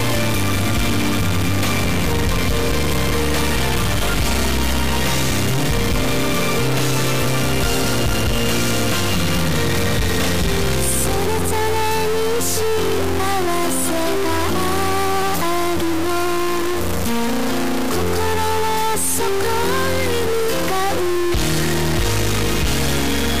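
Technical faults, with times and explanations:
Throughout: stuck bit. A harsh, buzzy distortion sits on the whole clip. The likely cause is one data bit held at a fixed value by a broken line or converter. That bit is high in the word, with a step of about -15 dBFS. Roughly half the samples are shifted by that amount, in a pattern that follows the waveform. The error also flips with the sign of small values, so low-level sound carries loud noise.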